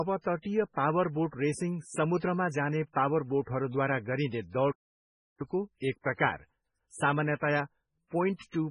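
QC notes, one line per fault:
throughout, MP3 compression: The speech has a heavy watery, swirling quality, with chirpy metallic artefacts on s sounds and smeared consonant attacks. This is likely low-bitrate MP3 encoding, which fits a rate around 16 kbps. Short of bits, the encoder drops weak frequency lines that blink on and off between frames. On a spectrogram that shows as patchy, flickering islands of energy, and a hard ceiling with nothing above 10.5 kHz.
4.71–5.41 s, playback stall: The speech stops abruptly mid-flow, and the audio goes silent for about 0.68 s before resuming. The cause is likely the player running out of data or having its thread blocked, so it had nothing to output until it recovered. On the waveform this is a flat gap with sharp edges at both ends. On the spectrogram it is a blank vertical band that cuts across all frequencies.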